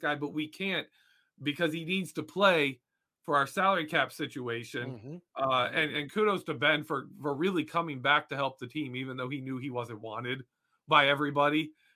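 Speech recording with no technical faults detected at any point.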